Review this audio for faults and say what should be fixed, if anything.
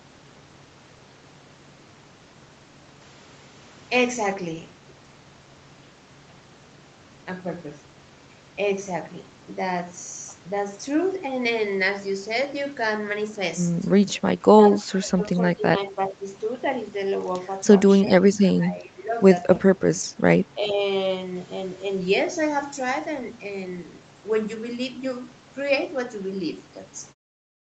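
Speech dips at 14.7–15.21 s, 15.87–16.22 s and 18.38–19.14 s, by up to about 20 dB. This is likely speech suppressed in double talk, with the echo canceller treating the talker as loudspeaker echo. To prevent it, improve the echo canceller's double-talk detection or cut loudspeaker-to-microphone coupling, for example with headsets.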